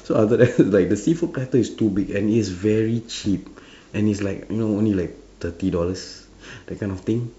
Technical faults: none

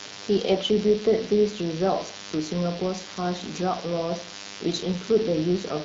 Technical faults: DECT cordless phone buzz

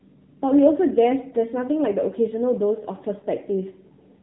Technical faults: AMR narrowband mobile codec; lost AMR speech frames

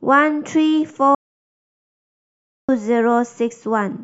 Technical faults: audio dropout to silence

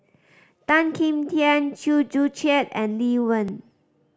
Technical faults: dropped buffer (overrun)

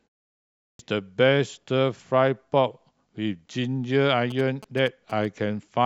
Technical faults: clipped start after a pause; GSM signalling bursts

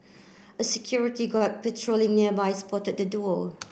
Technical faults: short stall from a late packet

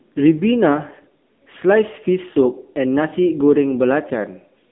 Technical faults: AMR narrowband mobile codec

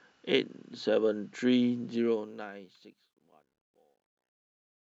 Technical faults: truncation distortion on a fade

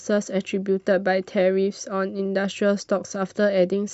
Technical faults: none

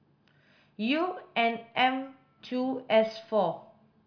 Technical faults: none

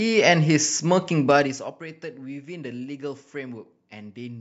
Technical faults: zipper noise

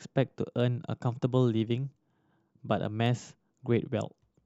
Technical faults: block size mismatch (truncated)

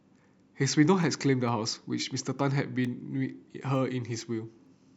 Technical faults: word clock ticks

